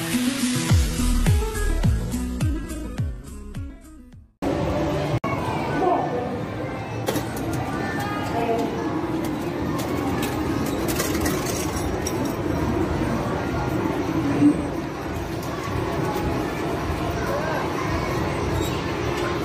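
From 0.0 to 4.0 s the adaptive stream is starting at a low bitrate: dull, artefact-heavy sound fitting roughly 16 kbit/s HE-AAC, then an abrupt, gapless step up to fuller quality near 96 kbit/s, band-limited at 12.3 kHz.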